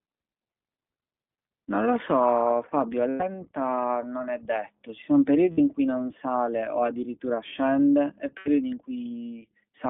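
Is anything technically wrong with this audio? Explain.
Yes. The speech carries two faults: iLBC codec coloration throughout, and lost iLBC frames at three points.

iLBC codec, across the whole clip. The sound is confined to roughly 150 Hz to 3.5 kHz, which fits this narrowband VoIP codec in its 20 ms, 15.2 kbps mode. Each frame's excitation is coded independently, leaving clearly audible roughness and a slightly synthetic edge.

Lost iLBC frames, at 3.10 to 3.22 s (100 ms), 5.52 to 5.59 s (60 ms) and 8.38 to 8.49 s (80 ms). The decoder fills each dropout by repeating the last pitch cycle blended with noise, so the gap sounds like a held, faintly buzzy vowel before normal speech snaps back.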